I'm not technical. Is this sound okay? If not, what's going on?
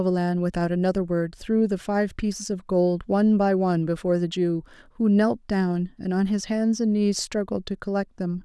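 Yes, there's nothing wrong to hear in this recording, so you can relax about it.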